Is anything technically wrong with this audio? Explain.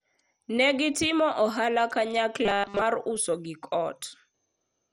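Yes. Two faults are audible in this speech clip.

MP2 compression runs through the whole clip. The sound is dull and has a gurgling, granular texture. Nothing is present above about 15.9 kHz. The likely cause is MPEG Layer II coding at a low bitrate. That coder divides the spectrum into 32 sub-bands and shares out bits. Starved upper bands switch off or flicker. The remaining bands are coarsely quantised, and the damage here is heavy.

Robotic sound from repeated short buffers occurs from 2.45 to 2.82 s. The voice turns into a rigid, metallic buzz at 200 Hz across the whole span, while still roughly tracing the words. The likely cause is late-arriving audio. The software fills each gap by looping the last short block instead of playing fresh audio. A 200 Hz buzz fits a block about 5 ms long.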